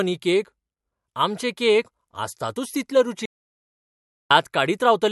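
At 3.26 s the speech cuts out to silence until 4.31 s, about 1.05 s lost. This audio dropout to silence likely came from lost input, with no room tone left.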